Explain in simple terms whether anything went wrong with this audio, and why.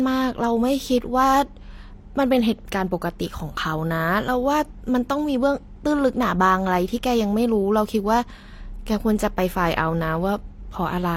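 The speech sounds smeared and watery from start to finish, with a swirly or metallic edge on top, and nothing is left above about 16.3 kHz, so the brightest sparkle is missing. The likely cause is transcoding between lossy codecs: the audio was squeezed first as MP3 and then again as HE-AAC. The second codec wasted effort copying the first one's flaws and added its own, so both kinds of damage are heard together.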